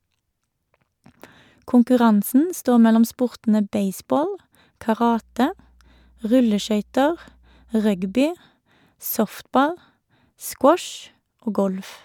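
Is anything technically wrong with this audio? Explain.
Yes. From 5.02 to 8.18 s a steady low 60 Hz mains hum sits roughly 35 dB under the speech, from power-line interference such as a ground loop.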